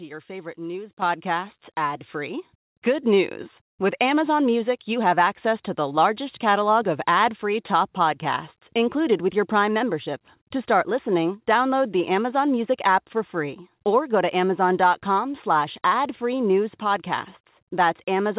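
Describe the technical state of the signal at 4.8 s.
At 4.8 s the speech is intact, carried cleanly through the WebRTC call path with the narrow telephone-band sound of a G.711 codec, which leaves nothing above 4 kHz.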